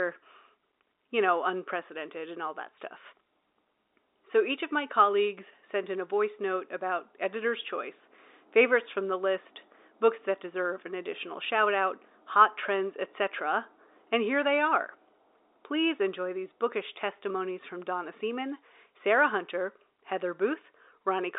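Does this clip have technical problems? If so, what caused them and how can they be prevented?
No, the speech arrives as ordinary G.711 telephone audio, confined to the usual phone-line band of about 300 Hz to 3.7 kHz with nothing above 3.8 kHz, which is simply how a normal phone line sounds and not a problem.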